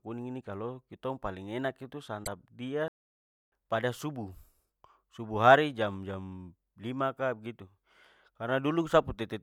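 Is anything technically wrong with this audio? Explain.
Yes, there are two faults, both early in this speech clip.

Broken MP3 bit reservoir, at 2.24 to 2.28 s. This is likely a decoding gap: MP3 frames can store part of their data in space borrowed from earlier frames, and when frames go missing, the next frame reaches back and reads unrelated bytes instead. The 40 ms disturbance spans roughly one and a half frames of 26.1 ms. It comes through as a brief disturbance, with the sound skipping slightly forward.

Playback stall, at 2.88 to 3.52 s. Less than a second after the glitch, the output drops to silence for about 640 ms, cutting the speech off mid-flow before it resumes. The likely cause is that the player's buffer ran dry, or its processing thread was held up, so nothing reached the output until data flowed again. It sounds like an abrupt dead gap rather than a fade or a pause in the talking.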